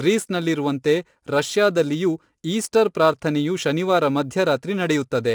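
Low-delay AAC compression runs through the whole of this speech clip, from start to finish. The voice sounds rough and grainy, with a noisy haze filling the gaps between pitch harmonics and nothing at all above 11.6 kHz. The cause is likely a low-delay AAC codec such as AAC-ELD, whose very short frames resolve harmonics poorly. The damage is plainly audible and fits a bitrate around 32 kbps. Sample clock jitter is also present throughout. The converter's clock wanders by a few microseconds, so each sample is taken slightly early or late. The resulting error scales with how steeply the waveform is moving. It adds a hiss-like roughness about 30 dB below the signal that swells on loud and bright passages and drops away in the pauses.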